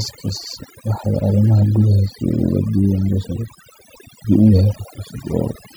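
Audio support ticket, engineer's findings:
Overdone noise removal throughout speech. Background dropped, breaking into twinkling specks. Denoiser set too aggressive, gating individual bands near noise estimate, removing quiet speech components.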